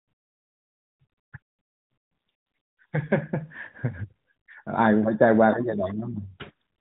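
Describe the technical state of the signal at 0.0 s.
At 0.0 s the signal is intact, with the speech carried through the narrowband AMR mobile path as normal and no fault present.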